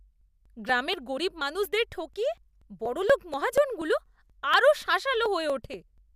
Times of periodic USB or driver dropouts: 0.21-5.98

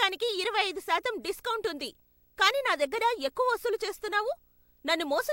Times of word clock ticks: none

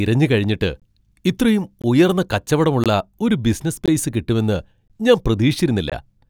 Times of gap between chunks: 0.80-0.82, 1.82-1.84, 2.84-2.86, 3.86-3.88, 4.88-4.90, 5.90

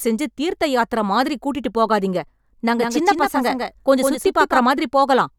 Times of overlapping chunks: none

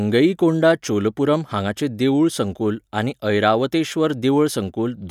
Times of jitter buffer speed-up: none

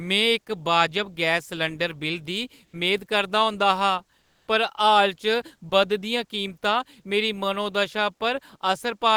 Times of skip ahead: none

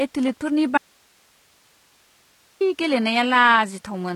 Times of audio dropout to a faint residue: 0.78-2.61

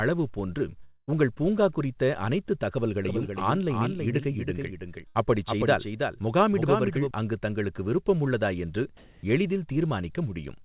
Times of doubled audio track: 3.05-7.11

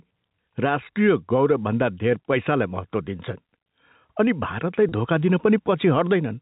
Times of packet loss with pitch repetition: 4.89-4.92

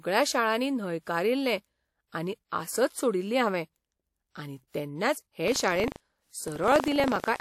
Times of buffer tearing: 5.44-7.41

